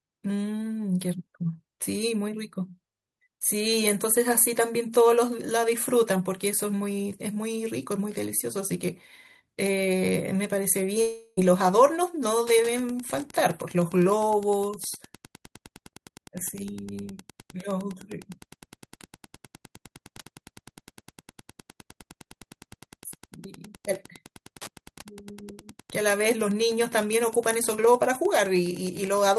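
From 11.01 to 11.39 s the speech gives way to a fading concealment buzz, with no true silence, likely a long network dropout that lost about 360 ms. From 12.44 s to the end, Wi-Fi interference adds steady ticking every 102.4 ms, roughly 25 dB below the speech, from a nearby radio's beacon rectified in the audio circuit.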